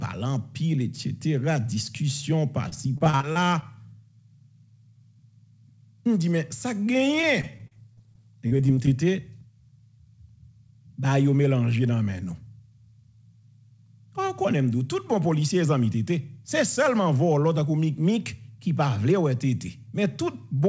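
Audio passed through a call path, with nothing above 8 kHz, consistent with a wideband codec such as G.722. Repeated packet loss makes it choppy and robotic at 2.69–3.63 s and 7.21–8.88 s. Dropouts of 40 ms or less are patched by extending the previous sound.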